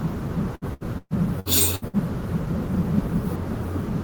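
From 0.55 s to 1.96 s the speech turns choppy and robotic, breaking up six times where pieces drop out. This is repeated packet loss: audio arrived late or not at all, over and over, and each hole was patched by stretching the last sound. About 0.43 s of this stretch was patched that way, roughly 31 percent of it, and the longest single gap ran 127 ms.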